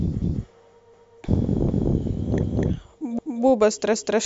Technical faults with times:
0.22-0.44 overlapping chunks
0.94-1.19 overlapping chunks
1.69-1.94 overlapping chunks
2.44-2.69 overlapping chunks
3.19-3.44 overlapping chunks
3.94-4.19 overlapping chunks

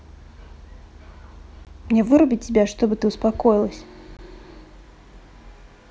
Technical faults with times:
1.65 gap between chunks
4.17 gap between chunks

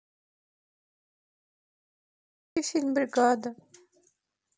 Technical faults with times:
0.00-2.56 audio dropout to silence

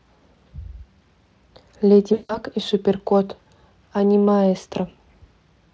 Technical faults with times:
2.13-2.38 VoIP packet loss concealed by the speech codec

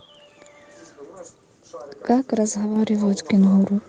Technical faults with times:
2.76 microphone volume stepped up

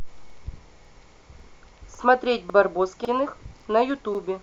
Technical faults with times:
0.30-0.35 overlapping chunks
0.85-0.90 overlapping chunks
1.40-1.45 overlapping chunks
1.95-2.00 overlapping chunks
2.50-2.55 overlapping chunks
3.05-3.10 overlapping chunks
3.60-3.65 overlapping chunks
4.15-4.20 overlapping chunks

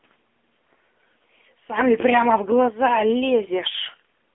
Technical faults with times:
0.00-4.35 AMR narrowband mobile codec

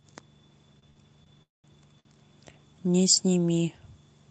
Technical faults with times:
0.79-0.99 short stall from a late packet
1.24-1.29 short stall from a late packet
1.42-1.67 call audio freeze
2.00-2.08 short stall from a late packet

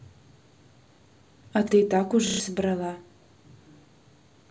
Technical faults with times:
0.96-0.99 repeated buffer
2.27-2.40 repeated buffer

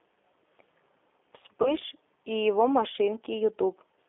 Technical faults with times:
0.00-4.08 G.729 codec
1.63-1.74 VoIP packet loss concealed by the speech codec

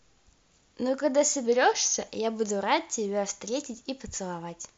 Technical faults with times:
1.46-2.07 drift correction step

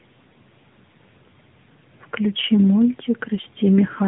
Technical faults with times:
0.00-4.08 tandem speech coding

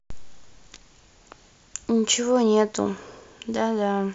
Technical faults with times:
none

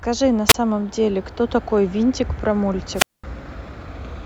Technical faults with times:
0.48-0.54 wireless microphone squelch dropout
2.94-3.24 wireless microphone squelch dropout

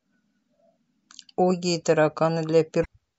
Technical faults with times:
0.00-3.18 MP3 compression
2.81-2.86 damaged data in a compressed stream

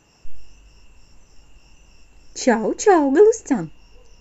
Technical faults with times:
none

